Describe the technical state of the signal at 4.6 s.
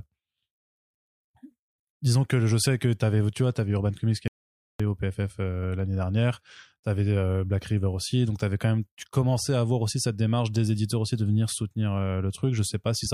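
At 4.6 s the signal sits inside an audio dropout to silence running from 4.28 to 4.80 s, about 0.52 s of silence with no room tone. The speech cuts off abruptly and resumes mid-flow, most likely because the input was lost while recording continued.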